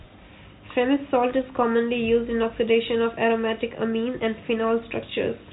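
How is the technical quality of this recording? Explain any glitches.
No glitches can be heard anywhere in this speech.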